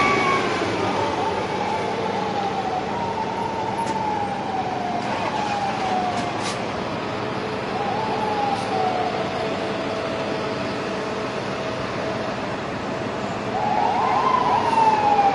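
From 6.78 s to 10.78 s the audio switches abruptly, with no gap, to an adaptive stream at a lower bitrate: coding artefacts rise, consistent with a drop from roughly 96 kbit/s AAC to HE-AAC near 24 kbit/s after the connection slowed.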